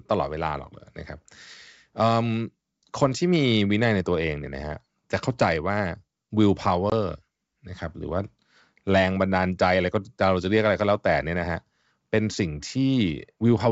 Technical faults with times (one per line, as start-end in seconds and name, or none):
6.90-6.93 packet loss on an ADPCM call